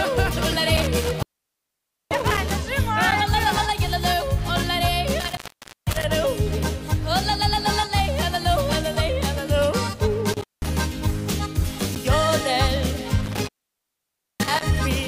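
Intermittent contact breaks the sound four times: 0.77 to 2.55 s, 5.20 to 6.04 s, 10.33 to 10.73 s, and 13.26 to 14.63 s. A loose connection opens. The signal drops out for 0.88, 0.50, 0.18 and 0.91 s. Crackle marks each edge. Faint hiss remains while the line is open.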